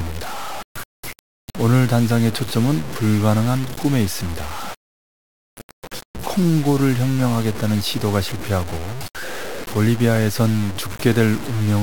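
Throughout the speech, grainy distortion follows the signal, roughly 15 dB below it, and quiet passages sputter or vanish, likely from low bit depth without dither, truncated to 5 bits.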